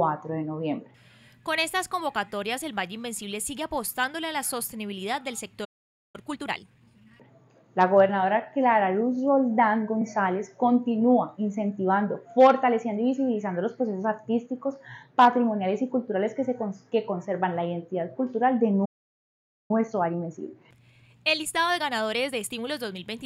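A playback stall at 5.64 to 6.16 s cuts the sound off mid-flow for about 0.49 s. The player most likely ran short of buffered data or had its output thread blocked, leaving silence until it recovered.

Time-compressed catch-up follows from 6.16 to 7.14 s. Small pieces are cut out and cross-faded to shed the backlog, so the audio plays about 1.5 times faster at unchanged pitch, sounding hurried.

Hard clipping occurs at 7.81 to 7.99 s, 12.41 to 12.51 s and 15.20 to 15.28 s. The peaks reach about 0 dB of overdrive, right at the limit of what a stage can pass, so their tops are flattened. This adds high harmonics that are heard as brief crackle on those peaks.

A second playback stall runs from 18.85 to 19.71 s, a gap of about 0.84 s. Catch-up then runs from 19.71 to 22.71 s at about 1.15 times speed, a gentler, longer rush.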